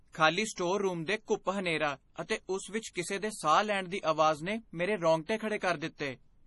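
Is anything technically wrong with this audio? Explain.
Yes. Throughout, the speech sounds watery and swirly, with nothing above 11.4 kHz; this is likely heavy MP3 compression at a bitrate as low as about 32 kbps, starving weak frequency lines. Pre-echo puts a short hiss just before attacks at 0.53 to 0.57 s, 2.28 s, 2.93 to 2.96 s and 5.26 to 5.29 s, because block-spread quantisation noise leaks ahead of each sharp onset.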